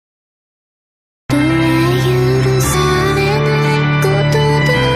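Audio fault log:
0.00–1.30 s, cut-off start: digital silence, then sound enters mid-event with no attack or fade, unlike a fade-in, because capture began late.
2.73 s and 4.61 s, compressed frames skipped: audio jumps ahead about 100 ms, then about 50 ms, in 23.2 ms frame steps.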